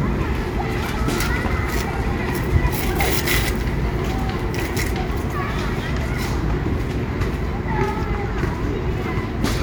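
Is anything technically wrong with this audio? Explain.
No, nothing technically wrong can be heard in this audio.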